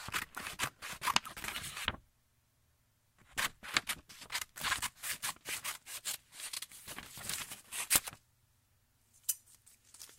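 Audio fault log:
No fault found in this audio.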